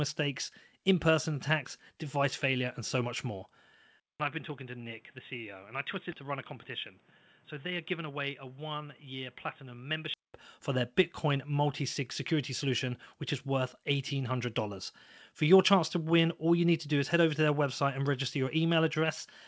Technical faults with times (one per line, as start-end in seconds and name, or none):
4.00-10.34 input switched to a poorer device
6.12-6.14 skip ahead
6.23-6.87 jitter buffer speed-up
7.66-8.59 jitter buffer speed-up